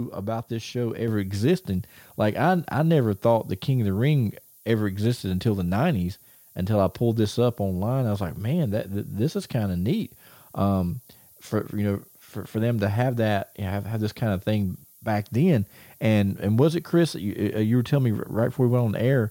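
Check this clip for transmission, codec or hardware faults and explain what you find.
Two faults are audible in this speech recording.

Throughout the clip, a steady, thin hiss sits roughly 30 dB below the speech and climbs strongly toward the top of the band. This is low bit depth with noise shaping, which fits an 8-bit signal. The coarse rounding error is fed back and pushed upward in frequency, so the hiss collects in the highs.

At 1.08 s, just after "about this show", the voice and the background jump up together by about 5 dB in a single step. This is the microphone volume stepped up. The call software judged the input too quiet and raised the device's input gain at once, lifting everything the microphone picks up.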